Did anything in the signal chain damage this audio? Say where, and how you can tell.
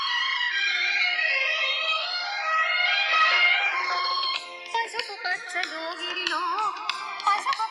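Yes, at the converter stage: the channels are drifting apart for the whole clip. The two sides were captured on independent clocks differing by roughly 200 ppm, so their offset slides to about a millisecond by the end. Summed to mono, this gives slow flanging, with comb notches gliding across a spectrogram.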